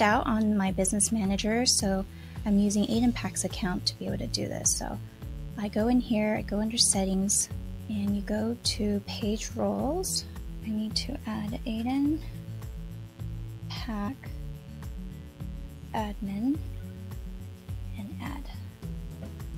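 A steady, raspy buzz runs under the whole clip, sitting roughly 30 dB below the sound. This is mains buzz: sharp switching spikes at twice the 60 Hz mains rate leak into the signal, spreading harmonics well up into the kilohertz range.

Jumps interrupt the sound at 1.37 s and 10.36 s, each skipping around 30 ms. At 14.07 s a longer jump of around 70 ms occurs. These are compressed frames skipped, consistent with 26.1 ms frames left out, twice singly and once in a run of about three.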